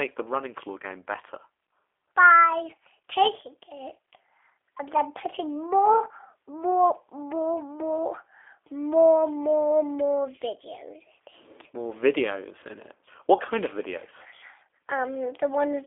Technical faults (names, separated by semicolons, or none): G.729 codec